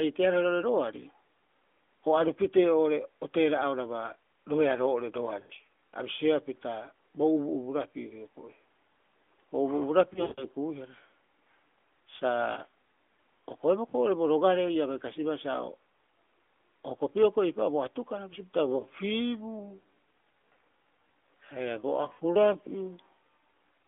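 At 5.40 s, radio errors cause a run of lost AMR speech frames lasting about 100 ms. The decoder fills the gap by repeating the last good pitch and vocal-tract settings at falling gain, so the sound stretches briefly and thins out. A longer cluster follows from 10.14 to 10.45 s: 180 ms of losses scattered over 240 ms, with a longest run of 160 ms. Over that run the held sound drags out and fades almost to silence before recovering weak and rough.

At 12.52 s a 40 ms loss gives only a short dip or warble. All of this sits within the narrowband AMR mobile line's band of roughly 250 Hz to 3.5 kHz.

From 18.43 s, just after "atukara bisio", to the end, a time-stretched section takes over, likely software fitting the audio to a set length. It plays at 0.655 of normal speed while the pitch stays put. Short pieces are repeated to fill the time, so the pace drops abruptly.

Inside that slowed stretch, at 22.14 s, another 60 ms of lost AMR speech frames brings a brief warbling dip.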